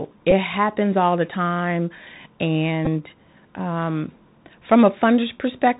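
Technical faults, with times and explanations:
Throughout: Bluetooth CVSD headset codec. The speech passes through the narrowband headset codec, likely a 64 kbps CVSD link, which tracks the waveform one bit per sample with an adaptive step. Nothing above 4 kHz survives, s sounds turn scratchy, loud peaks distort, and a grainy hiss sits beneath.
0.31 s and 2.85–2.88 s: Bluetooth headset packet repeated. Voice packets were lost and the last good packet was decoded again, covering about 11.2 ms each time, which fits three 3.75 ms packets. Each gap becomes a brief buzz near 267 Hz, the first just before "happens all the time".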